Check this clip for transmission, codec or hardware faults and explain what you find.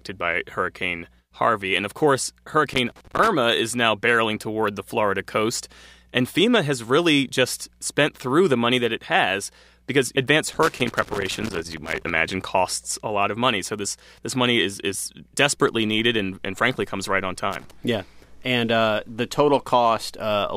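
A loose connector in the signal chain is crackling in three places. A worn or dirty contact somewhere in the cable or jack keeps making and breaking as it shifts, chopping the signal on and off and adding pops from any DC on the line. It sounds like irregular scratchy crackle: from 2.73 to 3.28 s after "of course", from 10.53 to 12.10 s after "it has because advanced", and briefly from 17.53 to 17.71 s after "frankly comes right on".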